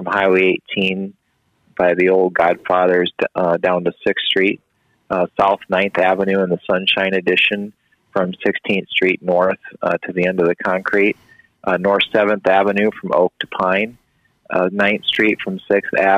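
Right near the end, from about 15.13 to 15.16 s, there's a case of chunks out of order. One short block, roughly 11.6 ms long, turns up late and plays after the two blocks that should have followed it. Nothing actually goes missing, but the shuffle leaves three hard seams in that 35 ms stretch, so you hear a quick jumbled stutter.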